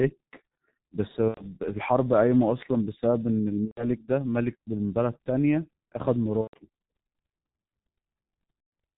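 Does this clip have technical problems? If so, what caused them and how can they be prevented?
Yes. The G.723.1 codec is used throughout. The speech is muffled and hoarse, with nothing above 4 kHz and blurred consonants, which fits its rate of about 6 kbit/s. Use a wideband codec at a higher bitrate.

There is VoIP packet loss concealed by the speech codec at 1.28–1.49 s, 3.65–3.84 s, 6.41–6.56 s and 8.60–8.72 s. The decoder stretches the last sound into a fading buzz or coloured noise, which fits three or four lost 30 ms frames. A more stable network, jitter buffering or forward error correction would prevent this.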